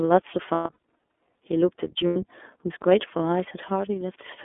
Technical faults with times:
0.00-4.44 iLBC codec
0.54-0.75 lost iLBC frames
2.07-2.17 lost iLBC frames

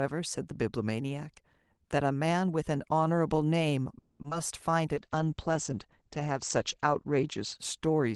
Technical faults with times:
3.98-4.20 call audio freeze
4.22-4.32 short concealed packet loss
4.94-8.15 call bitrate drop

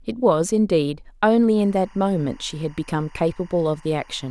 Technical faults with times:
1.57-4.31 timecode bleed

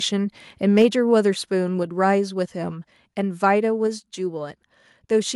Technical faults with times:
0.77-0.85 microphone overload
0.82 microphone volume stepped down
1.83 microphone volume stepped down
3.87 microphone volume stepped down

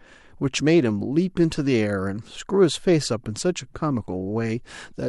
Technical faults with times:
none

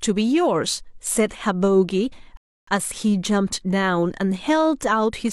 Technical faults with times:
2.37-2.67 rebuffering stall

